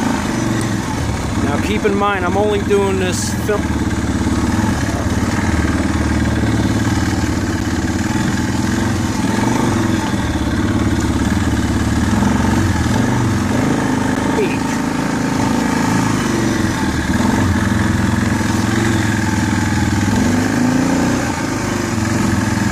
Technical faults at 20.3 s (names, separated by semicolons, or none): none